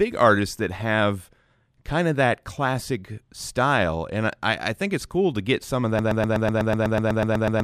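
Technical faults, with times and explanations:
5.99 s to the end, broken-record loop: the player, encoder or stream has likely stalled and kept resending the last fragment it held, so right after "to get some of" a slice of speech about 0.12 s long repeats exactly, back to back, 13 times until the clip stops. The identical repeats give a rapid mechanical stutter, and whatever speech should have followed in those final 1.6 s is gone.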